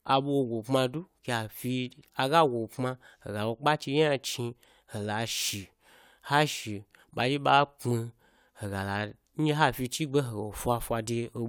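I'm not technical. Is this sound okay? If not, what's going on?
Yes, this speech recording has no technical problems.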